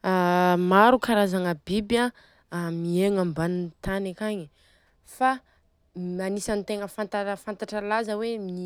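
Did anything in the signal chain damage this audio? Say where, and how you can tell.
No, nothing in the chain did.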